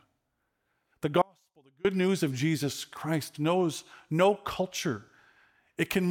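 An audio dropout to a faint residue runs from 1.22 to 1.85 s: the signal cuts abruptly for 630 ms, leaving a faint leak roughly 35 dB down, likely from a momentary signal-path interruption.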